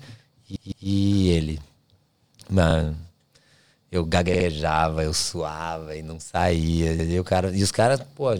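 Right at the start, around 0.56 to 0.88 s, there's a stutter from repeated frames: a 160 ms chunk of speech plays three times in a row, adding 320 ms, which fits a run of about five compressed frames. It happens again at 4.34 to 4.46 s, a 64 ms block played three times just before "eu suava e não", and once more at 6.99 to 7.09 s, where a 96 ms block plays twice right after "suava e não saía".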